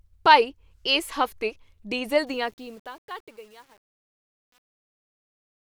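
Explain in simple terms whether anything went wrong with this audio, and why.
After "ਭਾਈ ਇਸ ਹਫ਼ਤੇ ਡੀਜ਼ਲ", at 2.27 s, truncation distortion on a fade sets in. The fade-out, starting around 2.27 s, was processed with too little precision, as if at only 9 bits. From 2.57 s to the end at 5.67 s the fading sound turns gritty.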